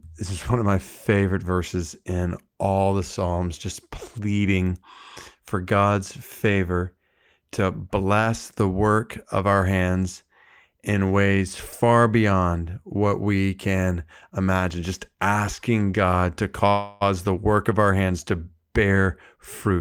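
A call audio freeze runs from 16.69 to 17.03 s, just before "the work of our". The last sound is drawn out and fades for about 0.32 s, then the speech resumes where it stopped with nothing lost. Packets were likely held up in transit, draining the jitter buffer and adding 316 ms of delay.

A jitter buffer speed-up follows from 18.84 to 19.78 s, right after "of our hands to". The speech runs at about 109% speed at unchanged pitch and sounds hurried. The buffer had built up excess audio, so the receiver trimmed short pitch-period slices, removing about a tenth of a second in total.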